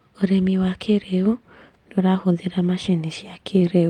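No technical faults can be heard anywhere in the speech recording.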